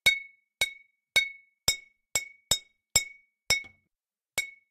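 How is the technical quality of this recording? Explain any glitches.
No glitches can be heard in these sounds. Nothing interrupts or disturbs the audio at any point.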